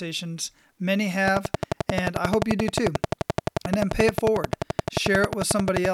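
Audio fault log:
1.28 to 5.86 s, train of clicks: a steady ticking of 11.4 clicks per second at an even pace, around fifty in all, each poking about 20 dB above the speech and audible in the pauses too, likely interference from nearby gear or a faulty connection or power supply.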